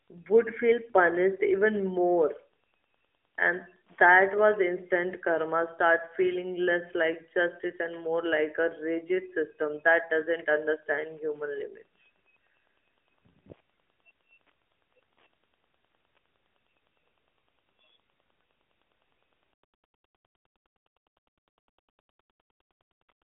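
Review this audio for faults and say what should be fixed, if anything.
A faint, steady ticking runs under the speech for the whole clip, sitting well below the talker's level at about 9.8 ticks per second. This is Wi-Fi interference: a nearby Wi-Fi radio sends a beacon every 102.4 ms, and the audio circuitry rectifies each burst into an audible click. The ticking persists through the narrow, phone-band sound of the AMR narrowband mobile codec. To prevent it, keep Wi-Fi devices away from the audio chain and use shielded, properly grounded cabling.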